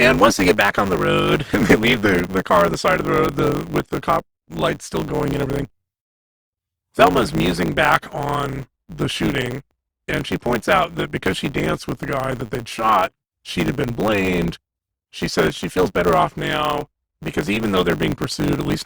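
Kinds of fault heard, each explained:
Block size mismatch (truncated): one stage hands over longer blocks than the next one reads, so the tail of every block gets dropped. Across this whole speech clip you hear a steady 100 Hz buzz, and the speech runs 1.16 times fast with its timbre kept, which fits 512-sample blocks.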